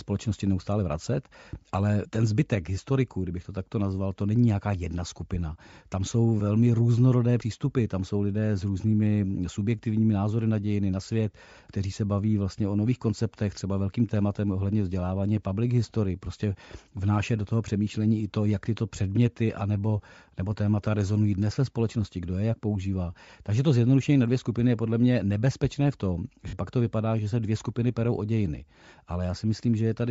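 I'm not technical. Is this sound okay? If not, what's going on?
No. Throughout the speech there is a grainy, breathy edge, and the highest sounds are partly replaced by a hiss-like fill. This is likely Bluetooth LC3 compression, the data-saving codec used by newer Bluetooth earbuds, clearly audible here.

At 26.48 to 26.53 s, between "mě nebezpečné v tom" and "pak to vypadá že", there are lost LE Audio frames. About 50 ms of audio never arrived, so the decoder patched the gap with a noisy smear built from the preceding sound.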